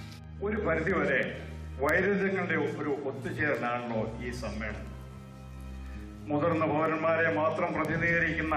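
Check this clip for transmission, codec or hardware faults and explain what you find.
One fault is present: word clock ticks, running from 0.24 s to 8.51 s. Short, sharp ticks of uneven strength recur roughly every third of a second, about thirty in all. The receiving device is running on its own clock rather than locking to the sender's digital stream. The two clocks differ by something on the order of 70 ppm. Each time they drift a full sample apart, a single sample is dropped or repeated.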